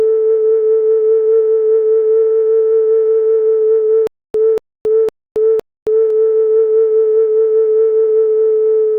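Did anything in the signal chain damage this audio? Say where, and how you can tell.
Yes: stutter with silent gaps in the music from 4.07 to 6.10 s. The same 236 ms fragment plays four times, each followed by about 272 ms of digital silence, so the burst returns on an even 508 ms cycle. That regularity points to the playback or streaming stage, most likely a stalled player retrying: each attempt replays its last buffered fragment, then runs empty. The music that belonged in that span is lost.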